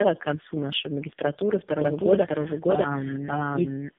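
Speech, with tandem speech coding throughout: the sound is rough, muffled and warbly in a way that fits three passes through a narrowband AMR-type coder, each recoding the previous one's damage. On a spectrogram, nothing appears above 3.6 kHz, and the harmonics look smeared and patchy. From 1.70 s, right after "к концу нашей магистратуры", a doubled audio track starts abruptly and runs to the end. A dry copy at roughly equal level trails by about 0.7 s, likely from a second, slower capture path, and the waveform shows each syllable repeated without decay.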